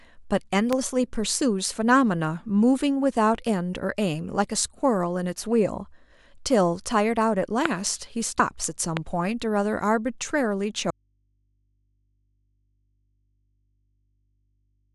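At 0.73 s a single loud pop, likely from a voltage step such as a plug, switch or static discharge, sits about 15 dB above the speech, which continues beneath it. On the waveform it is a tall, narrow spike, and on a spectrogram a thin vertical stripe spanning all frequencies.

At 4.23 s compressed frames are skipped. One 23.2 ms frame, about 20 ms of audio, never plays, so the speech jumps ahead. A spectrogram shows a discontinuity in the harmonics.

A second pop at 7.66 s is stronger, about 20 dB above the signal.

At 8.39 s two frames drop, losing about 50 ms, and the speech jumps ahead again.

A third pop follows at 8.97 s, about 15 dB up.

From 10.9 s to the end comes an audio dropout to a faint residue. The speech cuts off abruptly, leaving only mains hum about 45 dB below the previous level, likely because the signal was lost while the following path stayed live. The waveform collapses to a near-flat trace, and the spectrogram keeps only thin horizontal hum lines.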